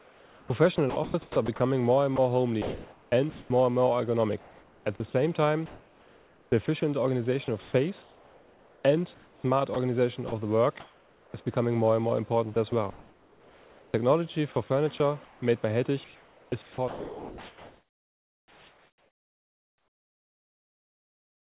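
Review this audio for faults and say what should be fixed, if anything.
Sound chopped by the voice detector at 0.0–3.5 s, 4.4–5.14 s, 6.66–11.34 s and 12.54 s to the end. Quiet passages and edges drop to synthetic hiss, about 1.6 s, 0.54 s, 1.94 s and 6.5 s in turn, likely the sender's detector gating transmission and substituting comfort noise. The hiss sits against the 4 kHz-limited call audio. To prevent it, disable voice-activity detection and discontinuous transmission on the sending side, or lower its threshold so quiet sound keeps being sent.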